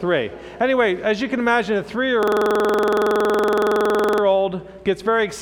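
From 2.23 to 4.23 s, a system hang loop replays one 46 ms slice at 21.5 Hz: a machine-gun stutter of identical copies, not dropouts.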